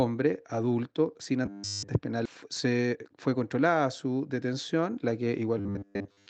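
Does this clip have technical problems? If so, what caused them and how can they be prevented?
Yes. From 1.46 to 1.90 s and again from 5.58 s to the end, there is robotic sound from repeated short buffers. A rigid 100 Hz buzz suggests about 10 ms of audio looped while fresh audio arrived too seldom, likely a starved playback buffer. The first stretch is essentially all repeats and the second roughly 70 percent. On a spectrogram this shows as evenly spaced horizontal harmonics at multiples of 100 Hz, and the waveform shows identical 10 ms cycles. A larger buffer and steadier packet delivery would prevent it.

At 2.25 to 2.27 s the audio skips ahead. About a second of material is gone, and the two sides are spliced with no fill. The waveform shows an abrupt join, and the spectrogram shows a sudden vertical discontinuity. Keeping the jitter buffer from overflowing would prevent this.

From 2.34 to 3.13 s, jitter buffer speed-up removes short pitch-period pieces, roughly a tenth of a second in total, so the sound runs about 11 percent fast at unchanged pitch. 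Spectrogram events appear compressed in time while the harmonic spacing stays the same. Smoother network delay, so packets don't bunch up, would avoid it.

Through the Opus call path, the spectrogram is empty above 8 kHz.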